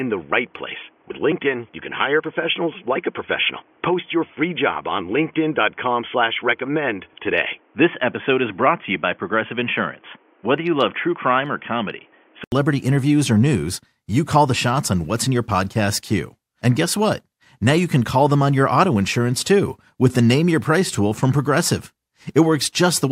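From the start to 12.52 s the speech sounds boxy and dull, as if the input switched to a poorer device, likely a headset call profile: nothing above 3.4 kHz, a quieter level, and added background noise. An 80 ms gap precedes "interviews or news you", where fuller sound returns. A spectrogram shows a hard ceiling jumping upward there.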